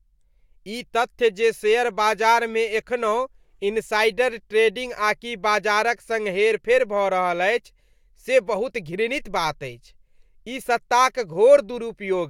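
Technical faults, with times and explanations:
No technical faults can be heard anywhere in the speech.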